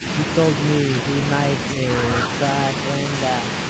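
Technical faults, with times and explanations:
0.00–0.04 s, speech suppressed in double talk: the opening of the speech dips by around 10 dB for a brief moment. The likely cause is an echo canceller unable to separate this talker from loudspeaker echo while both sides spoke, so it turned everything down.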